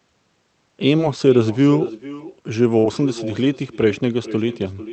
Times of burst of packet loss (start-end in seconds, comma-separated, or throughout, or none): 2.79-2.91